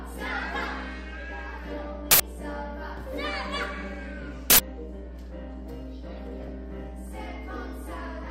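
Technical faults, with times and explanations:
throughout: Mains hum. A steady low tone at 60 Hz sits under the whole clip, roughly as loud as the sound itself. A ground loop or nearby transformer is feeding the power line frequency into the signal path.
2.11 to 2.20 s and 4.50 to 4.59 s: Uninitialised buffer. Each event is a short, loud burst of harsh digital noise lasting about 85 ms. Playback read stale memory as samples before real audio was written. The length fits a 4096-sample block.
6.43 to 6.48 s: DAB burbling. A brief disturbance across 12 frames rides over the audio. Weak reception let a small fraction of bit errors slip past error correction into the MP2 data. Damaged samples put short blips of noise into single sub-bands.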